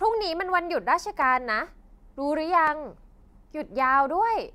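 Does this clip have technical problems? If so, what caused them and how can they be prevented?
Yes, two brief ticks interrupt the speech at 1.22 s and 2.67 s. Each is a block of digital silence about 1.3 ms long, which fits a 64-sample buffer left as zeros. The audio drops to zero and returns with no fade, so each gap is heard as a tick. Larger buffers or more processing headroom keep each block filled on time.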